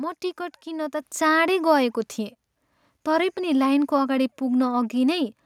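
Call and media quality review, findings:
Microphone volume stepped up at 1.02 s. Speech and background jump together by about 7 dB in one step. Component: call software automatic input gain. It judged the microphone too quiet and raised the device input volume at once, not gradually.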